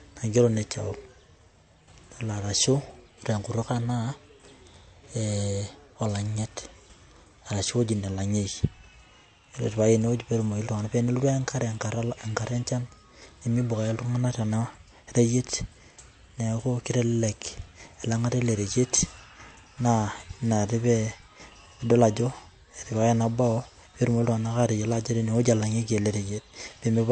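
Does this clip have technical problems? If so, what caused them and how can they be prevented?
Yes. Throughout the speech there is nothing above about 8.3 kHz, and the top end has the watery, swirling smear of heavy MP3 compression, which fits an earlier encode at roughly 48 kbit/s. The likely cause is low-bitrate audio saved at a high bitrate: the file was later re-encoded as a much larger MP3, but that second pass cannot restore what the first one discarded. On a spectrogram this shows as a hard, flat ceiling near 8.3 kHz with empty space above it for the whole clip, and patchy, blotchy energy just below the cut-off. To prevent it, always encode from the original uncompressed or lossless source rather than from an existing low-bitrate file.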